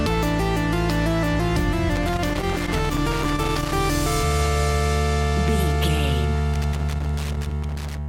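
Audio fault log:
1.95–3.72 s and 6.54–7.98 s, loose connector crackle: a worn or dirty contact in the signal path keeps making and breaking as it shifts, so the audio is chopped on and off at random and any DC on the line turns each break into a pop, heard as irregular bursts of scratchy crackle. On a waveform these spans show jagged dropouts and sharp spikes. A spectrogram shows scattered vertical broadband streaks at uneven spacing.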